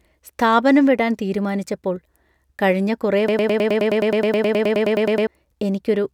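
At 3.28 s the speech locks into a broken-record loop: a 105 ms fragment repeats 19 times until 5.27 s, likely a stalled player replaying its last buffer.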